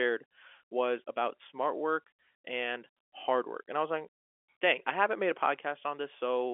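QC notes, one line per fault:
No faults are heard in this speech clip. The G.711 telephone coding is working as expected, holding the sound to a line band of 300 Hz to 3.4 kHz with nothing above about 3.7 kHz.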